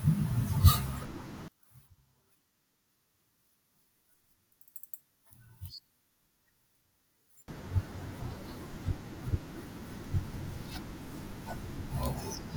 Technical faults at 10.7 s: none

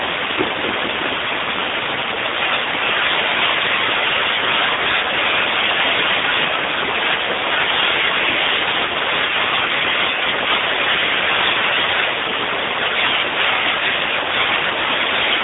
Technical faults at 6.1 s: AMR narrowband mobile codec

